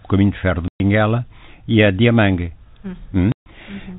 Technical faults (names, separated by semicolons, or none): packet loss filled with silence